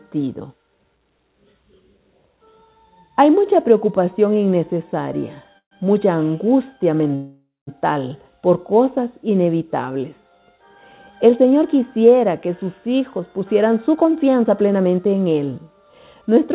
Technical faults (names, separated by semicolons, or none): call audio freeze; jitter buffer speed-up